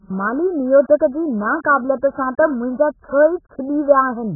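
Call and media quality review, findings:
Speech band-limited throughout, nothing above about 1.7 kHz; dull, smeared, warbling sibilants. Likely AAC compression at very low bitrate (AAC-LC, near 8 kbps): quantiser starves highs, holes bands. Spectrogram: hard ceiling near 1.7 kHz, patchy gaps below.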